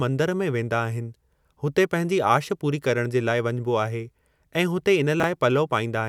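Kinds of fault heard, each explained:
Chunks out of order: a brief jumbled stutter near 5.2 s, where a 10 ms chunk plays three chunks late, leaving three hard joins.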